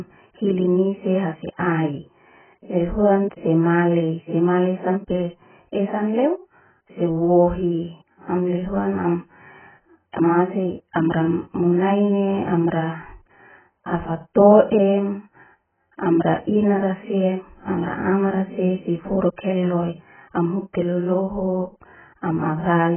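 Throughout the recording, the speech has been squeezed through an encoder with far too few bits to work with, most likely AAC compression in its low-complexity form. Short of data, the coder discards everything above 3.1 kHz and quantises what remains so coarsely that the damage is heavy. The voice comes out dull and smeared, its consonants blurred, with a watery warble on held sounds, which fits a bitrate down near 8 kbps.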